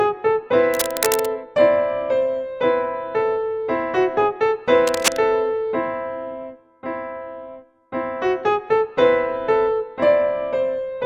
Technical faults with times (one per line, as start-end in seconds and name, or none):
0.74-1.26 cable scratch noise
4.87-5.24 cable scratch noise